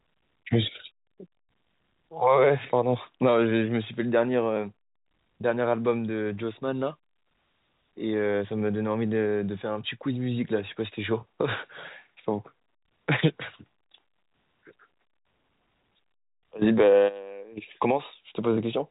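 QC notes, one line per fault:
No faults heard.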